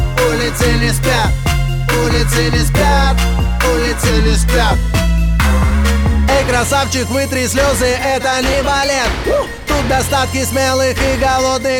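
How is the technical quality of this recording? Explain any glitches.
Two spots where the playback speed jumps, each sounding like a drift correction step. From 4.10 to 5.74 s the audio runs about 6% slow and drops roughly 108 cents, a bit over a semitone, then snaps back. From 8.53 to 9.07 s it runs about 6% fast and rises about 102 cents. It's likely clock-matching software abruptly changing the rate to drain or refill its buffer, so speed and pitch shift together.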